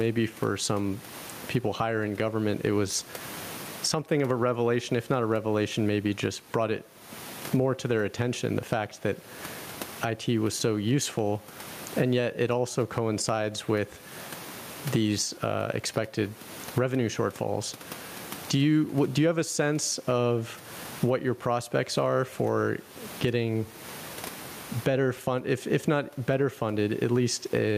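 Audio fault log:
throughout, gain pumping: loud and soft parts pulled closer in level, squashing levels; likely gain set too high, with a fast limiter swinging roughly 25 dB.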